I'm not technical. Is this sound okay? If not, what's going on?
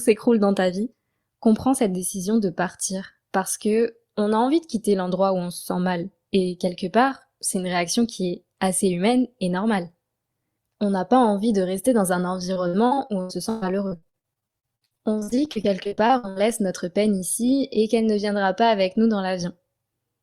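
No. From about 12.53 to 16.38 seconds the speech breaks up with repeated packet loss, which gives it a robotic sound. Pieces of audio kept failing to arrive, and each gap, up to 120 ms long, was patched by stretching the last bit of sound. About a third of that stretch is patched. Unlike one single dropout, this is a rapid run of dozens of small holes, so it sounds choppy rather than briefly silent.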